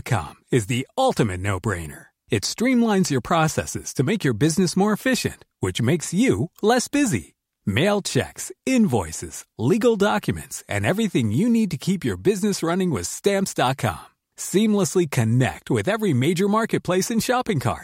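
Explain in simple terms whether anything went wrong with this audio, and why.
Nothing went wrong here: the speech comes through steady and intact, with no technical problems to be heard anywhere in the recording.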